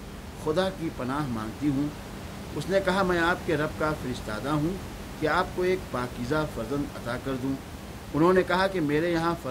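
Nothing goes wrong with the system anywhere in this speech recording, and the only thing beyond the talking is the room's own background noise, sitting about 12 dB below the speech as part of the original capture.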